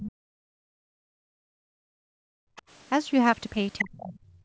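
Speech from a call, with the band topping out around 8 kHz. From 0.0 to 2.3 s the talker's voice gets pushed down hard, as much as about 40 dB, and again from 3.81 s to the end, dropping about 35 dB. That's speech suppressed in double talk, likely the echo canceller turning everything down while both sides talked at once. The other side's voice is also leaking through: a faint scrap at 2.56 to 2.62 s, about 25 dB under the talker, then a much stronger stretch from 3.79 to 4.19 s, only about 5 dB down. That's likely loudspeaker echo the canceller didn't fully remove.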